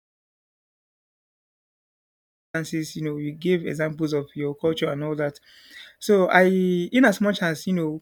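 A speech clip that opens with an audio dropout to silence already in progress: the first 2.54 s are silent, with no room tone, before speech cuts in abruptly mid-flow. This is likely a lost input, unlike a quiet pause, which keeps background noise.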